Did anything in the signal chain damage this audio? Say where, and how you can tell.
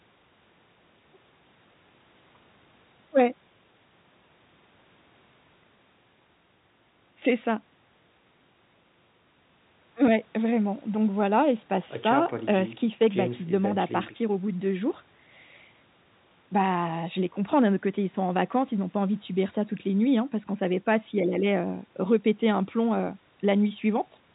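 No, nothing in the chain damaged this speech; the band stops at about 4 kHz, as expected from the narrowband telephone codec on the call path, and no stage adds any fault on top of that limit.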